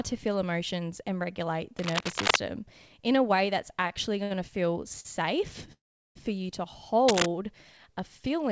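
From 1.79 to 2.37 s, cable scratch noise rustles over the speech at about its own level. A worn connector or cable being moved is the likely cause.

Short stalls from late packets follow at 3.82, 3.88, 4.23 and 5.00 s. The jitter buffer emptied, so the sound hangs for 16 to 69 ms, then resumes.

From 5.72 to 6.17 s, a call audio freeze holds the last sound as a fading buzz, then about 350 ms of silence. Delayed packets likely caused it.

From 7.07 to 7.26 s, cable scratch noise returns, slightly louder than the speech.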